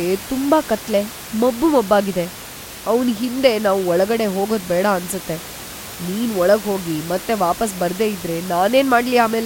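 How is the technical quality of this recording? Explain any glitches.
No glitches are audible; the only thing under the speech is the room's own background noise, sitting about 15 dB below it, which belongs to the recording space rather than the signal chain.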